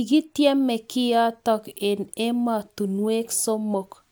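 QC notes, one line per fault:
No audible faults found in this recording.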